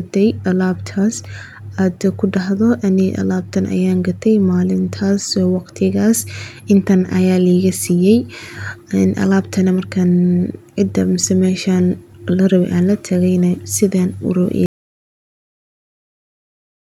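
The input feeding the recorder was most likely lost at 14.66 s, through a disconnected device, a broken link or an accidental mute, while recording carried on writing silence. The result is an audio dropout to silence: the speech stops abruptly mid-flow and the remaining 2.3 seconds, running to the end of the clip at 16.93 s, are dead silence with no room tone at all. Whatever was said during that stretch is simply gone.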